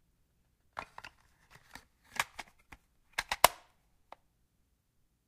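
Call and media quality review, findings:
Crude rate conversion, 2.20 s to end. Gritty, inharmonic fizz tracking loud and high content, only about 15 dB below signal. Nearest-sample resampling without filtering, consistent with a 48 kHz to 44.1 kHz conversion.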